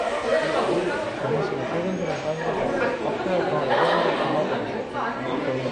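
AAC compression damage runs through the whole clip of sounds: nothing remains above 9.6 kHz, leaving the sound dull and smeared, likely from AAC-LC coding at a low bitrate around 32 kbps.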